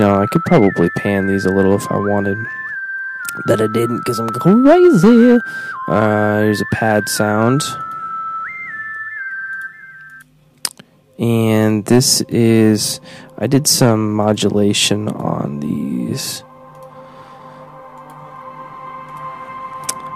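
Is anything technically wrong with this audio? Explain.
Yes. Hard clipping runs through the whole clip. The signal is pushed about 12 dB past what a stage can pass, so peaks are sliced flat. Only around one percent of samples hit the ceiling. Those flat tops add high harmonics, heard as crackle and grit on loud moments.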